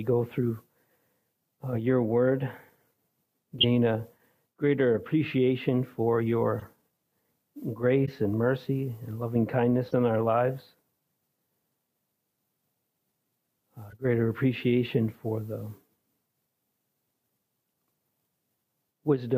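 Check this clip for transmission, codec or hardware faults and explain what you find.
Six short chirps and noise bursts point to a codec fault. Each is a corrupt frame decoded: damaged bits in a few consecutive compressed frames were played anyway, so misread gains and codes put energy at the wrong frequencies. They fall at 3.59–3.65 s (the loudest, fairly strong), 4.95–4.99 s, 6.59–6.69 s, 8.05–8.10 s, 9.85–9.93 s and 13.90–14.01 s, each lasting roughly 50–110 ms.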